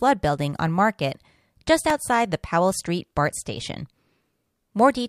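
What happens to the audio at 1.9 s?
A tiny click, almost a brief buzz, sounds at 1.90 s in the speech. It is a repeated buffer. New audio did not reach the output in time, so the device played its last block again, here a couple more times. Each block lasts only about 1.45 ms, which fits a 64-sample buffer. Repeating such a short piece with a hard join each time creates a click rather than an audible stutter, and a few milliseconds of the real signal are lost.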